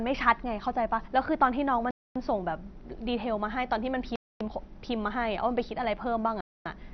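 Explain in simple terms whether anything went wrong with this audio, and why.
Two things went wrong here. The whole speech clip sounds muffled and a bit gurgly, with a grainy, watery edge on the voice and nothing at all above about 6.1 kHz. That's most likely MP2 compression squeezed hard: the format splits the sound into narrow frequency bands, and when it's starved of data it simply switches off the top ones and renders the rest coarsely, which is exactly that dull, bubbly low-rate digital radio quality.

On top of that there's a gap between chunks problem. The speech cuts to dead silence for a quarter of a second at 1.91, 4.16 and 6.41 s. It looks like the audio was handled in two-second pieces and something left an empty pause at every join. Nothing's missing from the speech itself, it just stops and restarts on a regular beat.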